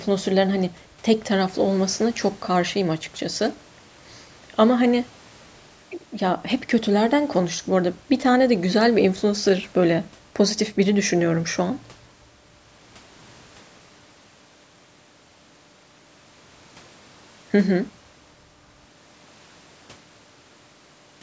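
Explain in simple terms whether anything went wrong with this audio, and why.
Nothing went wrong here: the speech simply sounds like it came through a call's microphone processing, which trims away the very deepest bass and anything above 8 kHz, and that's just how calls normally sound.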